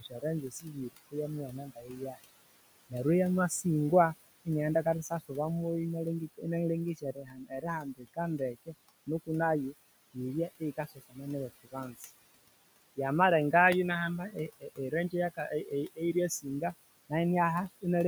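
Across the whole clip you get noise suppressor artifacts. The room noise, sitting about 17 dB below the speech, is being pulled down by about 19 dB frame by frame, so the background dips in the gaps and swells back under the talking.

On top of that, there's speech cut by the noise suppressor at 0.00–1.15 s, 1.48–2.18 s, 4.84–5.31 s (right after "neryo eya masingwa iniaghenda"), 6.95–8.75 s (ending just before "nuku nayo yibye"), 10.60–11.18 s, 11.64–12.08 s and 14.32–16.62 s. The suppressor mistook quiet bits of speech for noise and ducked them by up to about 22 dB, so endings and soft sounds come out swallowed. The worst stretch is around 7–8.75 s, where roughly a second goes faint.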